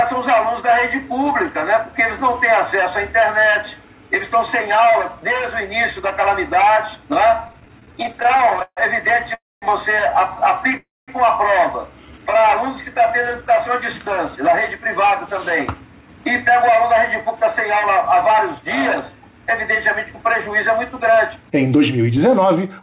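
From 7.48 to 8.79 s there are repeated stalls (stutter): around twenty short hitches in which the sound hangs on its last fragment, the longest about 140 ms. Packets arrived late and slow, so the jitter buffer kept running dry. Roughly 360 ms, about 28% of that stretch, is filled-in continuation, yet nothing is lost. Unlike a single freeze, it drags in many small catches.

At 9.35 to 9.64 s and again at 10.77 to 11.10 s comes a call audio freeze, likely from packets held up in transit. The last sound carries on briefly and then fades to about 220 ms of silence, putting in gaps of 0.27 s and 0.31 s. Playback then resumes where it stopped, so this is one clean pause, not a stutter.

From 12.06 to 12.42 s a jitter buffer slow-down stretches the audio to about 87% speed at unchanged pitch, adding about 53 ms by repeating pitch periods to rebuild the reserve. It sounds drawn out rather than broken.

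From 14.35 s to the end, near 22.80 s, a jitter buffer speed-up runs at about 106% speed with the pitch kept. Around half a second is trimmed away in small pieces, so the sound feels slightly hurried, the opposite of the earlier slow-down. Throughout, nothing is heard above 4 kHz, which fits narrowband G.711 telephone coding.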